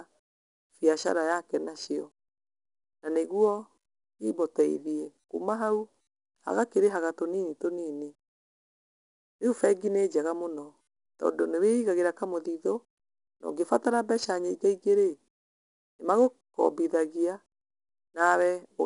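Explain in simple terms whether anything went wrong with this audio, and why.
4-bit ADPCM compression runs through the whole recording. Each moment of speech is stored as a tiny rough step from a guess, so a gritty hiss rides on louder sounds, and sharp starts get roughened. Nothing above about 10.6 kHz survives, leaving it dull.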